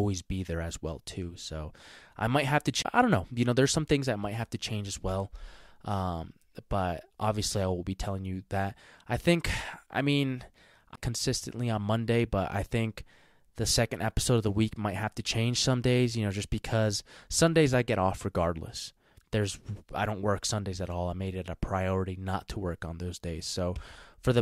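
At 2.82 to 2.85 s the speech drops out with a brief tick, a mute of roughly 30 ms, and resumes from a different point. The same happens at 10.96 s with a shorter gap, around 20 ms. Both are CD skips: the laser was knocked or hit a flaw and jumped to another turn of the disc's spiral, so playback briefly silenced and then picked up elsewhere in the track.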